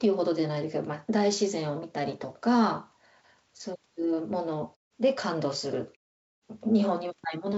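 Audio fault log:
The speech has passed through a WebRTC call path with G.722 coding at 64 kbps, which leaves nothing above 8 kHz, and the background drops to silence in the pauses before each return of sound, as that path normally does.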